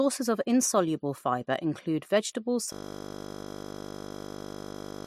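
From 2.73 s to the end, the speech gives way to a system hang loop. The machine or driver froze while the audio hardware kept replaying one 20 ms stretch of its ring buffer, about 117 times over. At that 50 Hz repeat rate it sounds like a steady buzz.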